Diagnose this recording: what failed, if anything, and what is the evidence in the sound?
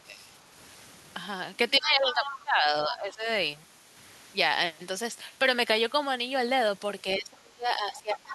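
Call processing: from 1.79 to 3.26 s the talker's level sags by around 15 dB, and from 7.04 s to the end by around 25 dB. This is speech suppressed in double talk, likely the echo canceller ducking both sides.

Call processing again: a second, fainter voice appears at 2.11–2.40 s, about 10 dB below the talker, and at 7.91–8.19 s, about 15 dB below. This is the other side's voice leaking through, likely as uncancelled loudspeaker echo, a distinct voice inside the ducked stretches, not a delayed copy of the talker.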